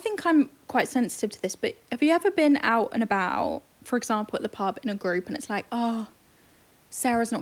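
No technical faults can be heard anywhere in the speech. Some room noise sits in the background, about 39 dB below the speech, as part of the recording itself.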